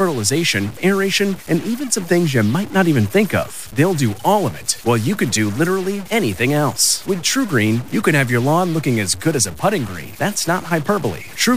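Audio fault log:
throughout, stuck bit: one data bit is likely held fixed at 0 or 1, so about half the samples land off by a step of about -30 dBFS, following the waveform, which gives the speech a harsh, buzzy distortion and fills the pauses with noise.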